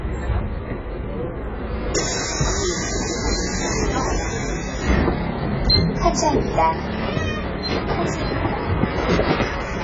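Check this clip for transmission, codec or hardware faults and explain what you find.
There's one fault, and it runs through the whole clip: AAC compression, most likely. Nothing comes through above 7.6 kHz, so the top end is gone and everything sounds dull. The damage is heavy, which points to AAC-LC at a very low bitrate, somewhere around 12 kbps. At that rate the encoder can't afford the bits for fine spectral detail, so it drops bands and smears what's left. That gives the sound a warbly, fizzy, underwater texture.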